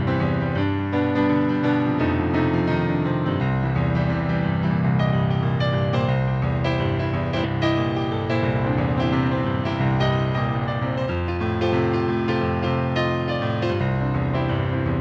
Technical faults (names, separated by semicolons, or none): skip ahead; jitter buffer speed-up